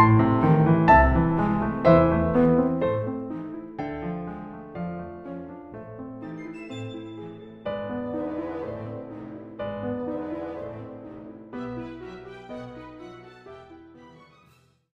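The audio has one fault: zipper noise between 2.3 and 3.72 s. Here the level drops by roughly 15 dB. The drop happens in coarse steps rather than as a smooth glide. Each step is an abrupt jump in gain, and each jump leaves a tiny click. At around twenty steps per second, the clicks run together into a ticking, zipping texture on top of the sound. It lasts only while the level is moving.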